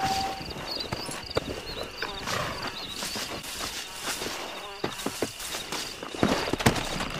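From 2.42 to 2.44 s, chunks out of order: one 10.67 ms block plays a chunk late, producing a jumbled moment. A waveform shows abrupt discontinuities at three joins, and a spectrogram shows thin vertical broadband lines.

At 3.41 to 3.44 s and again at 5.14 to 5.17 s, the audio jumps ahead with a brief glitch, likely a broken MP3 bit reservoir after missing 26.1 ms frames.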